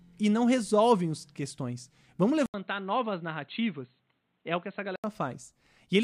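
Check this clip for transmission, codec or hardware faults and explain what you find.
One fault stands out: a likely input switch to a poorer device. At 2.46 s the speech cuts out for about 80 ms. It then returns duller and boxier, with nothing above 4.2 kHz. It is also roughly 5 dB quieter, over faint new background noise well below the speech. This fits a change to a narrower-band microphone or a headset call profile, with its own tone and noise. At 5.04 s the fuller sound returns.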